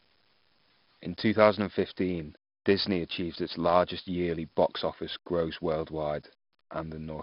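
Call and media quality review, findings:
4-bit ADPCM compression, throughout the speech. Gritty hiss rides every loud syllable, rising and falling with level. Heavy damage, smeared attacks where step size lags. Nothing above 5.3 kHz; dull tone fits a low sample rate, bitrate 44 kbps.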